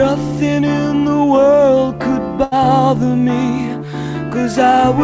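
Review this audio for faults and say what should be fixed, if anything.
A burst of packet loss runs from 2.44 to 2.53 s. The receiver covered the gap by extending the last sound for 76 ms while fading it down, then resumed with 80 ms of audio skipped. The spectrum stops at 8 kHz, which points to a G.722 call path. Forward error correction or a deeper jitter buffer on the link would prevent this.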